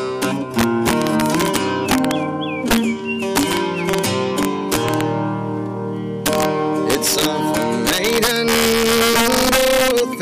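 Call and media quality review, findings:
Integer overflow, throughout the clip. Violent cracks on loud peaks, far harsher than clipping. Gain path driven about 6 dB past full scale with no limiting; overshooting samples, roughly one percent, wrap to the opposite sign and jump across the full range. Probable component: fixed-point gain or mixing stage.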